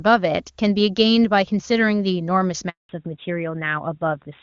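At 2.69 s there's a handover gap: the call jumps networks and no speech frames get through, so the sound fades out fast and stays silent for 200 ms, until 2.89 s when the new link picks up. Whatever was said in there is gone.

Right after that, from 2.89 s to the end, you get a fallback to narrowband. Before the gap the clean wideband sound points to HD Voice at its top rate. Now nothing above 4 kHz survives, which fits an older narrowband AMR codec, so the speech goes duller and rougher.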